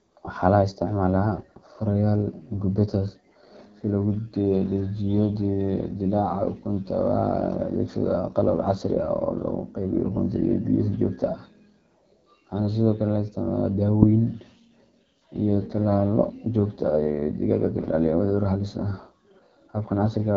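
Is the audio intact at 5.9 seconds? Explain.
No. The whole clip runs through the AMR wideband (HD Voice) codec at a low rate, likely around 8.85 kbit/s, so the speech at 5.9 seconds sounds rough and raspy, with nothing above 7.4 kHz.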